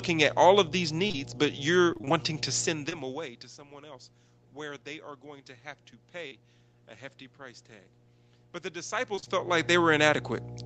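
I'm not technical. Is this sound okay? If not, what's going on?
No. A steady low buzz sits under the whole recording. It is mains hum at 60 Hz, a low tone picked up from the electrical supply, usually through a ground loop or a nearby transformer leaking into the audio. It is fairly prominent relative to the speech, so it stays audible the whole time rather than fading into the background.

There are also several brief smears or wobbles where the sound seems to blur for a split second. These are short concealed packet losses: small pieces of the call arrived too late, and the receiving end covered each hole by stretching the last bit of sound before blending back in. You hear them at 1.07 to 1.15 s, right after "at all of these"; at 2.90 s; at 6.27 to 6.33 s; and at 9.15 to 9.28 s, just before "felt like". The first and last of these are a few losses in a row, so they last a little longer.

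From 1.93 to 2.24 s, just before "to send", the voice turns choppy. This is repeated packet loss: five small holes came close together, and about half of that stretch is patched-in sound rather than what was actually said. The changes in loudness around 2.5 s and 8.5 s are just the talker moving relative to the microphone.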